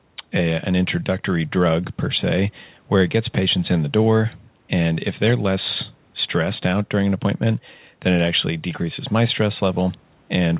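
No technical faults detected.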